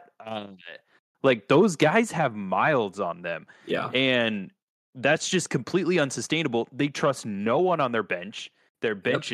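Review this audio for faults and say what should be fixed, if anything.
At 2.04 s the whole speech signal, voice and background together, drops by about 4 dB in a single step and stays at the lower level. This is a microphone volume stepped down, likely the call software cutting the device's input volume after judging the level too hot. A compressor or automatic gain ride would recover or move gradually, and a fade would slope, but here the background steps down with the voice and holds. To prevent it, set the microphone input level conservatively beforehand and disable the software's automatic microphone volume adjustment.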